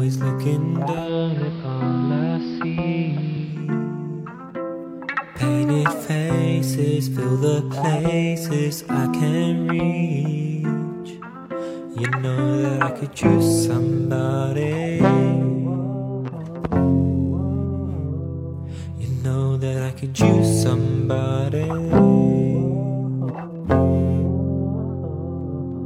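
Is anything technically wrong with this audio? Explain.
Yes. From 0.83 s to 3.69 s the audio shows a digital radio blending to analogue: the receiver lost its digital stream and cross-faded, over about 293 ms, to the station's AM broadcast, then back. During that stretch the treble is cut back, the level drops about 1 dB, and a steady hiss sits roughly 25 dB below the signal. On a spectrogram the upper band thins out and a broadband noise floor appears.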